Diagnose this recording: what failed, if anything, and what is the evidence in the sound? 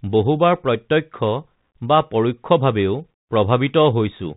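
The failure is at the codec stage: the whole recording has passed through a Bluetooth CVSD headset codec, and the damage is plainly audible throughout. The speech is band-limited with nothing above 4 kHz, a granular hiss sits under it, s sounds are scratchy, and loud high-frequency passages distort. The one-bit delta coding, stepping up or down, can't follow fast changes even as its step size adapts. The character points to the 64 kbps headset link.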